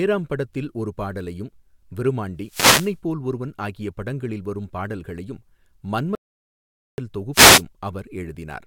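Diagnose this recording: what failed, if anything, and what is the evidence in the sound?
At 2.41 to 2.97 s, and again at 7.33 to 7.63 s, the speech is briefly swamped by a swish of static, first about half a second long and then about 0.3 s. These are wireless microphone noise hits, a failure in the radio link ahead of the converter. The FM carrier fades as reflected paths cancel at the receiver, the receiver's noise rises, and in a deep fade the hiss breaks up and covers the voice.

From 6.15 to 6.98 s the speech cuts off mid-flow into complete silence, with no room tone underneath, and resumes after about 0.83 s. Whatever was said in that span is lost. This is an audio dropout to silence. The likely cause is that the input path was interrupted, through a disconnected device, a failed link or a stray mute, while the recorder kept writing silence. That places it at the input or driver stage.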